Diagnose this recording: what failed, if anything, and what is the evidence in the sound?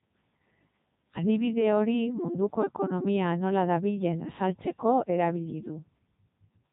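The failure is at the codec stage. The speech carries the Codec 2 vocoder sound throughout, robotic and buzzy, with nothing above 3.8 kHz. The heavy damage fits its 3.2 kbit/s mode. The waveform is gone. The decoder rebuilds the speech from sine waves, using only pitch, voicing, energy and a spectral envelope.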